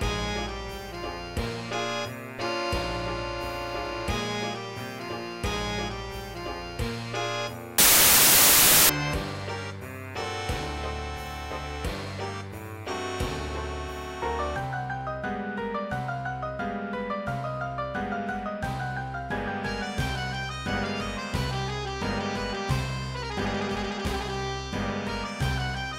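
From 7.78 to 8.89 s the audio collapses into loud, harsh noise with the original sound faintly buried inside it, running fast and high. This is a wrong sample width fault. The sound fits packed 24-bit samples being read as 32-bit ones. Each value then straddles bytes from neighbouring samples, so most become noise and only a few keep the signal's top bits. Grouping three-byte data into four-byte reads also plays it back about 1.33 times too fast, which raises the pitch.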